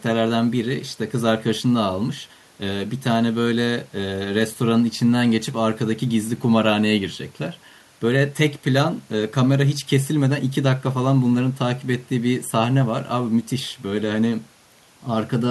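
Nothing here needs flagging, since the speech runs along without any technical trouble catching the ear at any point.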